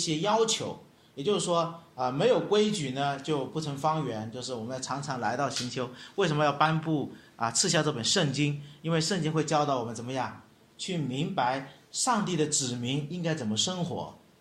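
A short glitch at 0.31 to 0.34 s and a longer one at 6.63 to 6.70 s, both reaching around -15 dBFS, are a corrupt frame decoded: damaged compressed frames, a couple and then a few, played anyway, throwing energy to wrong frequencies.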